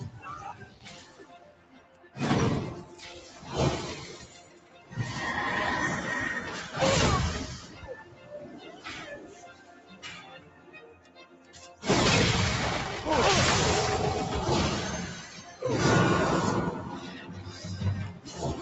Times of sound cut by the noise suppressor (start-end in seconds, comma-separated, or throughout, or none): 0.59-2.16, 2.89-3.43, 4.22-4.92, 7.62-8.86, 9.17-11.83, 15.22-15.62, 17.05-17.65, 18.13-18.36